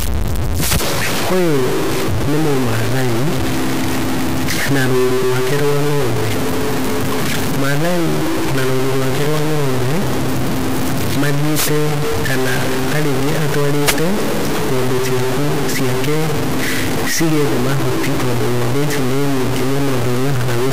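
Speech with harsh, buzzy distortion throughout and noise filling the pauses, likely a stuck bit, a high-order one whose step is roughly -10 dBFS.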